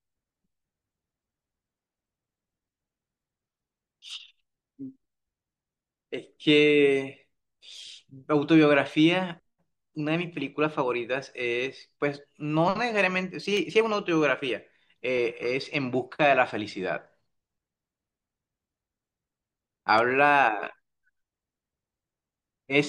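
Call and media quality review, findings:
Regular clicks in the speech, every 1.6 s from 0.76 s to 21.58 s, about fifteen in all. Likely clock drift buffer slips between two devices. Interval points to roughly 100 ppm mismatch. Each slip drops or repeats a few samples.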